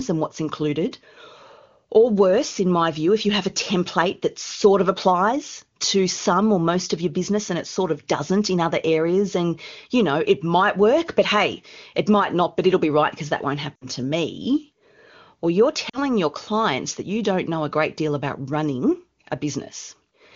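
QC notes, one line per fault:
13.76–13.86 s and 15.89–15.98 s, lost AMR speech frames: corrupted radio frames failed their checks, so the AMR-WB decoder (clear wideband speech around these points) held the last good pitch and vocal tract settings while fading the gain. The first gap follows "right because that won't" and precedes "to me." It lasts about 60 ms, which fits three 20 ms frames, and the sound smears and sinks quickly. The second gap precedes "your clients that you." It lasts about 40 ms and is a shorter dip, after which the voice returns briefly weak and rough.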